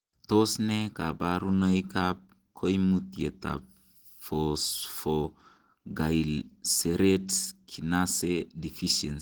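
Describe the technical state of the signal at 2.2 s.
At 2.2 s, as throughout, the speech sounds hoarse and grainy, likely from Opus compression in hybrid mode, which fits about 16 kbps, with upper bands rebuilt from coarse energies.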